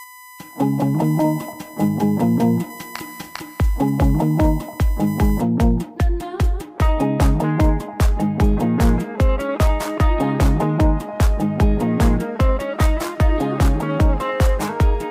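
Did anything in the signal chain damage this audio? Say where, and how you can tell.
Yes. A steady 1 kHz whine, about 20 dB under the signal, runs from 0.0 to 5.4 s. This is USB whine: analogue wiring picking up current drawn in the bus's 1 ms frames through power or ground.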